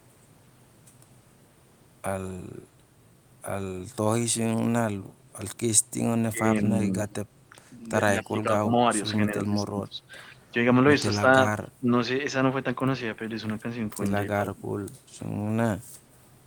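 From 6.31 to 6.76 s the speech dips by about 10 dB, and it dips again at 8.13–8.72, 9.31, 9.68–10.01, 11.8 and 14.4–14.64 s, sinking as far as about 25 dB around 9.7 s. That's speech suppressed in double talk, likely the echo canceller ducking this talker while the far side was also speaking. Around 7.1 and 8.23 s there's a faint echo leak: a quiet copy of the voice trailing by 169 ms, about 30 to 35 dB down, likely residual loudspeaker pickup the canceller didn't fully remove.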